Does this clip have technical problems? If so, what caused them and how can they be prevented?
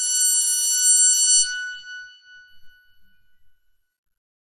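Yes. Throughout, likely MP2 compression at a low bitrate around 64 kbps starved the sub-bands of bits, leaving nothing above 13.8 kHz and a dull, gurgling, granular sound. Encoding at a higher bitrate or with a more efficient codec prevents this.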